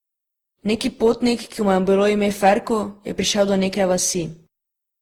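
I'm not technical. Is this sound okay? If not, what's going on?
No. The whole recording has a swirly, hollow, smeared quality, and consonants lose their sharp edges. That points to generation loss: the audio was likely compressed and decompressed again and again, around ten times, each pass adding its own small damage.

From 2.44 to 2.53 s, just after "je bilo ime", there is a brief crackle. That is hard clipping: the sound got louder than the recording chain could handle, so the tops of its waveform were cut flat, producing that crackle.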